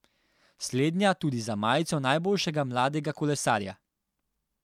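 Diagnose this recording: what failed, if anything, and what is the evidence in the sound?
Nothing failed: no audible fault at any stage of the signal chain, so there is no evidence in the speech to point to.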